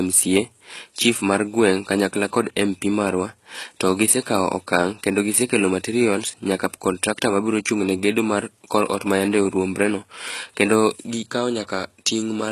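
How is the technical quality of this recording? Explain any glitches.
The technical quality is poor, with plainly audible codec damage across the whole clip. Throughout, the treble sounds gritty and metallic and the s sounds lisp, with nothing above 12.4 kHz. This is likely HE-AAC compression at a very low bitrate, around 16 kbps, which rebuilds the highs by copying lower bands upward. That copied treble is what tells it apart from a plain low-pass filter, which would sound dull rather than bright and metallic.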